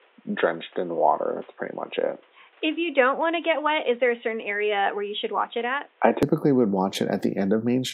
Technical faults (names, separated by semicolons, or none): input switched to a poorer device